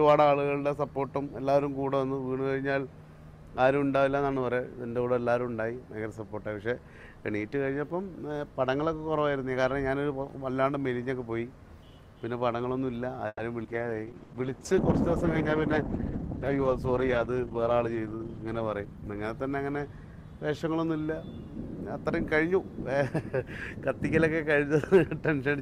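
Right at 13.27 s the sound stalls for about 150 ms: the last bit gets stretched into a fading buzz or hiss for around 120 ms, then about 30 ms of near-silence, and it carries on with nothing lost. That's a call audio freeze, likely packets held up in transit until the jitter buffer ran dry.

Then at 13.63 s there's a skip ahead. Playback jumps forward with only about 10 ms of fill, and something like 70 ms of audio is gone. The two sides butt together almost directly.

From 13.7 s to 21.99 s you get a call bitrate drop. The encoder got pushed from 128 kbps down to 13 kbps and sat at the bottom for roughly 4.8 s. At that rate Opus codes coarsely and trims the top end, so things go rough, watery or muffled until it climbs back.

Between 13.93 s and 14.16 s the jitter buffer slow-down kicks in. It repeats tiny pitch periods to rebuild its reserve, adding 47 ms and playing at about 83% speed. 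The pitch stays put, but sounds drag out.

Right after, from 14.23 s to 14.32 s, there's a burst of packet loss. About 60 ms is missing, papered over with 60 ms of concealment: the last sound held as a buzz or hiss that fades out, then it resumes further along.

Finally, 16.49 s to 17.67 s is a jitter buffer speed-up. The buffer had too much queued, so it snipped out short pitch-period chunks, about 100 ms in total. Playback runs at around 108%, same pitch, just a bit hurried.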